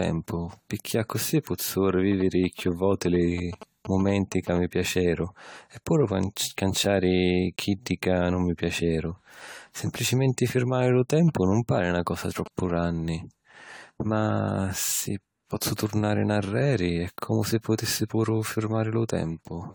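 A speech recording whose whole length has a swirly, hollow, smeared quality with softened consonant attacks, most likely generation loss from around ten successive lossy re-encodes, consistent with an AAC-LC chain near 96 kbit/s. A spectrogram shows scattered holes and blotchy quantisation noise throughout, with content still reaching about 20.1 kHz. From 2.12 to 4.58 s and again from 11.28 to 12.85 s, GSM signalling bursts from a nearby 2G phone add a galloping ticking buzz at 217 Hz, about 15 dB below the speech. On the spectrogram these appear as a comb of harmonics stacked on 217 Hz, and the waveform shows clustered spiky pulse trains.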